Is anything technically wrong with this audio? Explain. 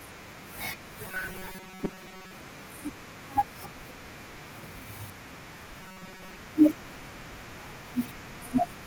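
Yes, there are two kinds of trouble in this speech clip.

From 1.07 to 2.38 s, and again from 5.81 to 6.38 s, you get robotic sound from repeated short buffers. The voice turns into a stiff, metallic buzz pitched at 188 Hz while still loosely tracking the speech. It's likely the playback running dry and looping the last chunk, about 5.3 ms long, to fill the gaps. Most of the real audio in those stretches is skipped.

At 2.55 to 2.62 s there's a corrupt frame decoded: a short burst of faulty sound. A few compressed frames arrived with damaged bits and were played anyway, so energy landed at the wrong frequencies for their length.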